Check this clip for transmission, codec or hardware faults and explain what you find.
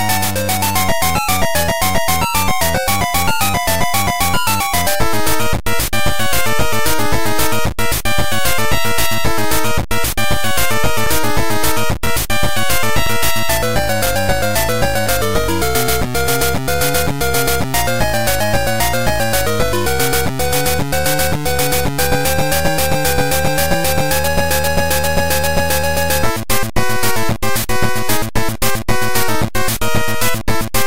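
One fault is present. Periodic USB or driver dropouts, 11.06 to 17.07 s: the bus or driver stalls once per second, leaving a few milliseconds of silence, heard as regular ticks.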